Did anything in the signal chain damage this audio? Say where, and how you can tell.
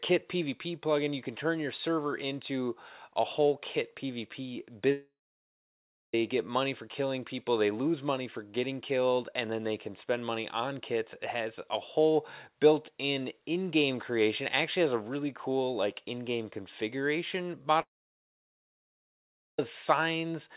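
Yes. Long network dropouts at 4.92–6.14 s and 17.81–19.59 s: sound decays into a fading buzz, then silence, likely lost packets on the network.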